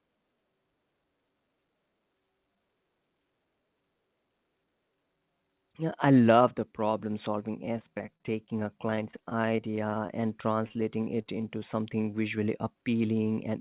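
Right after "love the problem solving", from 7.66 s to 11.43 s, the speech breaks up with repeated packet loss that sounds robotic. Packets keep arriving late or not at all. Each gap is patched by stretching the last bit of sound forward. There are dozens of short dropouts, none longer than 28 ms. About 0.38 s is filled in this way and about 0.27 s is simply missing. The result is choppy, and it sits in the narrow, telephone-band sound of the call path.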